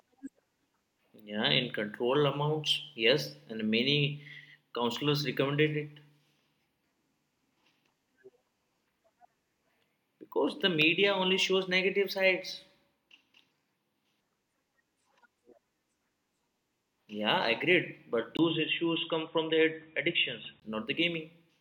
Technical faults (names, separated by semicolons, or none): input switched to a poorer device